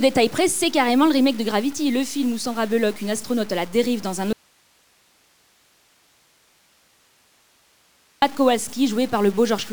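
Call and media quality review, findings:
Grainy, gritty distortion throughout, tracking the sound's level. Quiet passages worst. Error floor roughly 25 dB under the signal. Low bit depth without dither, likely from truncation to about 7 bits somewhere in the chain. Undithered rounding makes the error follow the waveform.

Audio dropout to a faint residue, 4.33 s to 8.22 s, about 3.89 s lost. Abrupt cut at both edges, no fade. Gap holds only hiss, roughly 40 dB below normal level. Likely cause: signal feed lost upstream while the downstream path stayed live, passing its own noise floor.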